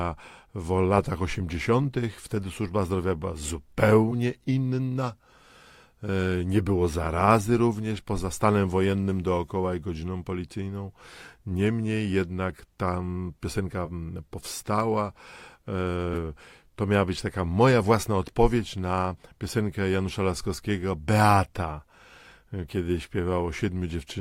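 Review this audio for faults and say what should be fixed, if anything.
Compressed frames skipped at 13.85 s after "jednak tam piosenka", 16.13 s before "to miała być taka", and 19.17 s after "moja własna odpowiedź na". The decoder jumps past lost frames, so the audio skips ahead. The first skip is short, roughly 20 ms, which fits 20 ms frames, and the other two drop around 150 ms each. To fix it, re-encode from the source and check the file's integrity so no damaged frames remain.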